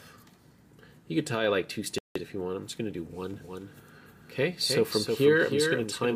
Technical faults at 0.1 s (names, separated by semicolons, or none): none